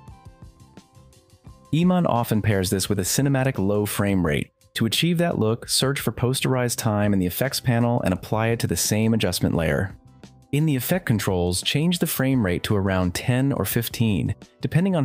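No technical faults can be heard in the audio.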